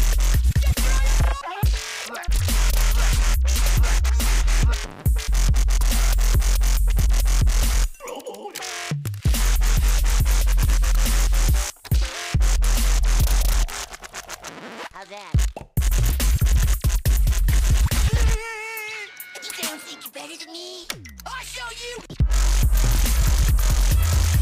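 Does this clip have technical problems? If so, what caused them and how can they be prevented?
No, nothing stood out as a technical problem on listening to this clip.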